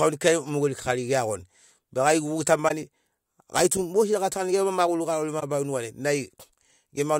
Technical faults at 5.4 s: corrupt frame concealed

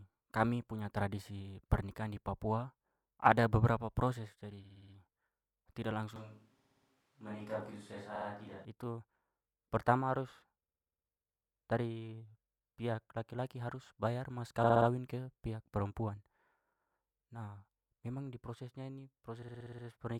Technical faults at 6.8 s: switch to a distant microphone; repeated frames

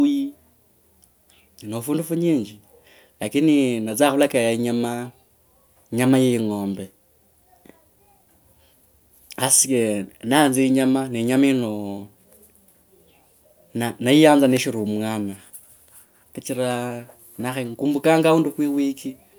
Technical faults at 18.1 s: none

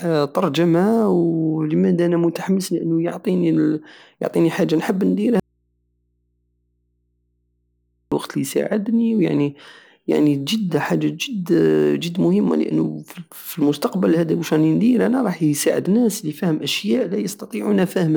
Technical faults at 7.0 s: audio dropout to a faint residue

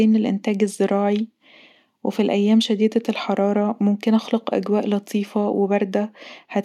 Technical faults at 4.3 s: none

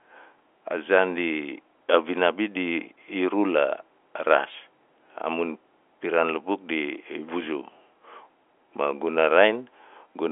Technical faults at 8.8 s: none

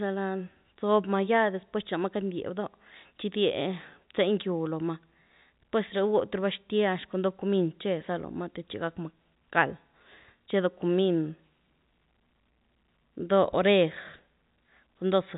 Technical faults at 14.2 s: none

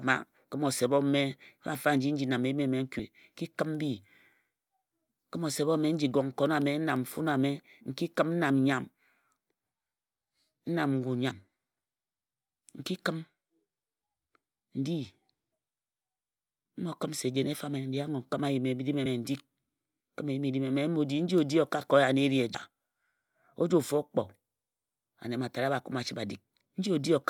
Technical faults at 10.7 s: none

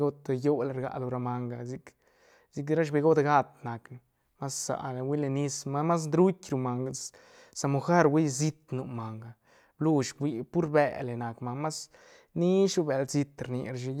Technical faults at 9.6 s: none

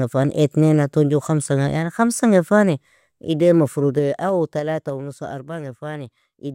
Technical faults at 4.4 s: zipper noise

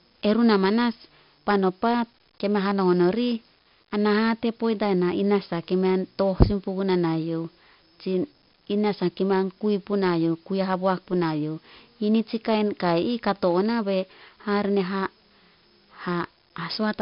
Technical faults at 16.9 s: 4-bit ADPCM compression

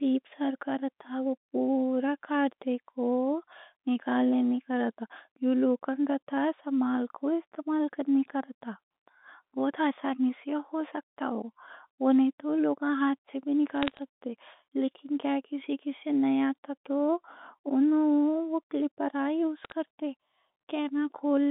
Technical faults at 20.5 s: none

